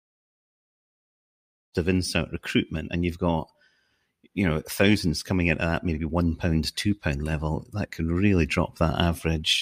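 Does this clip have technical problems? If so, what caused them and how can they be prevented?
No, nothing stood out on listening to this speech clip, and the gentle fade-in at the opening, which reaches full level at about 1.78 s, is a deliberate edit rather than a problem.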